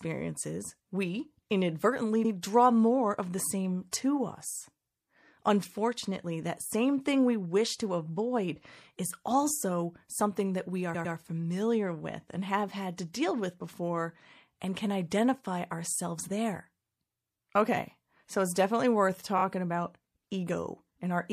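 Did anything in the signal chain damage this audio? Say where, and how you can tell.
Yes. The whole clip has the watery, swirly texture and dulled top of MP3 compression, plainly audible throughout, which points to a bitrate around 64 kbps. That points to the codec stage, likely as the cause. Unlike a simple low-pass, weak detail flickers in and out from moment to moment.

There are three sets of repeated frames, most likely from storage or network, where compressed blocks were written or sent more than once. After "we inadvertently", a 78 ms block at 2.24 to 2.31 s plays twice before "draw more of the". After "something that we are", a 104.5 ms block at 10.94 to 11.14 s plays three times, adding 209 ms before "familiar with and have". After "so it's definitely worth", a 26 ms block at 19.37 to 19.43 s plays three times, consistent with a single MP3 frame. Unlike a dropout, nothing goes missing. 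The same sound stutters and the clip gets longer.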